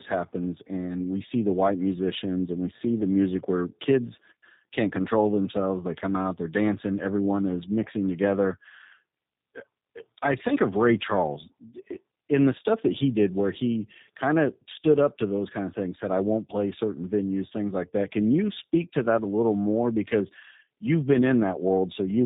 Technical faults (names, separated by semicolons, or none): tandem speech coding